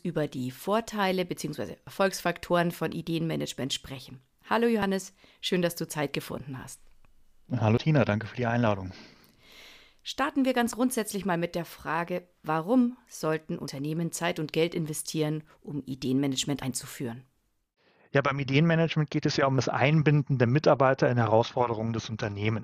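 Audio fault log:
1.87, 4.82, 7.78, 10.73, 13.68, 16.63, 19.58 s: audio missing between chunks. Roughly 50 ms vanishes at each point and the edges butt together with no silence, unlike a dropout. The steady ~3 s spacing likely reflects recording in fixed 3 s chunks.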